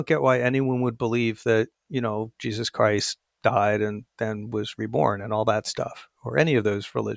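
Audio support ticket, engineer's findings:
Listened through the speech recording and nothing stood out; no fault to log.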